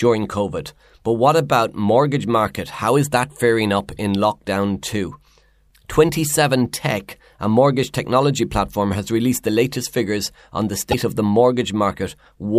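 From 10.91 to 10.94 s, between "latest figures on the" and "of the", the sound skips ahead with a brief glitch, likely a broken MP3 bit reservoir after one 26.1 ms frame was dropped.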